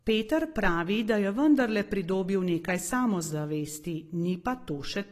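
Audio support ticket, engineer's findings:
AAC compression throughout the speech, plainly audible: dull, smeared top, nothing above 14 kHz, fizzy warble on sibilants. Likely AAC-LC encoder in the path, starved at a low bitrate near 32 kbps, coarse quantisation leaving spectral holes. Unlike a plain low-pass filter, the damage is textural, not just a loss of treble.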